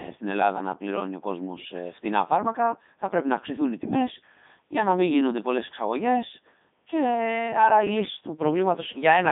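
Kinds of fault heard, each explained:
Codec 2 vocoder: the speech is rebuilt from pitch, voicing, energy and a spectral envelope rather than from the waveform itself, so it sounds robotic and buzzy throughout. The damage is heavy and the band runs from about 150 Hz to 3.7 kHz, with nothing above 3.8 kHz. The band loss is a side effect. What sets it apart from an ordinary narrowband or low-bitrate waveform codec is the synthetic, sine-built tone, which fits a rate near 3.2 kbit/s.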